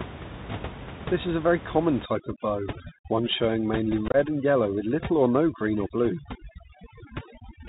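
From the first moment the speech carries the sound of the Bluetooth CVSD headset codec. Nothing above 4 kHz gets through, so the voice is boxed into a telephone band. The one-bit delta coding cannot keep pace with fast, loud rises, so s sounds come out scratchy and a fine granular hiss sits under every phrase. The amount of damage fits a 64 kbps CVSD link and is plainly audible throughout.

From 2.06 s, right after "is a very common", overdone noise removal takes hold and stays to the end. The room noise, which had sat about 13 dB below the speech, is pulled down, leaving twinkling specks where individual frequency bands flicker on and off. Quiet parts of the voice fall under the same noise estimate and are cut with it.

Between 4.08 and 4.16 s, unconcealed Bluetooth headset packet loss punches holes in the speech. About 45 ms is missing across a 60 ms stretch, the longest single gap being 22.5 ms, which points to something like seven lost voice packets. 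Nothing fills the gaps, so the edges are abrupt. The sound breaks up into a brief rough, chopped crackle and dips in level for a moment as the CVSD decoder recovers.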